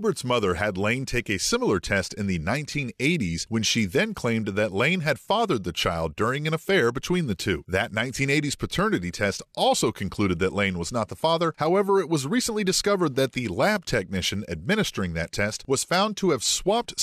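No technical faults can be heard anywhere in the speech.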